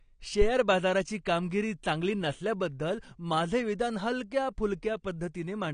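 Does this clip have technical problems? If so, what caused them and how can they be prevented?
Yes. Throughout, the speech sounds dull and smeared, with a warbly, fizzy edge on sibilants and nothing above 9.9 kHz. This is likely AAC compression at a low bitrate, consistent with AAC-LC near 32 kbps, which drops the top band and coarsely quantises the rest. Encoding at a higher bitrate prevents it.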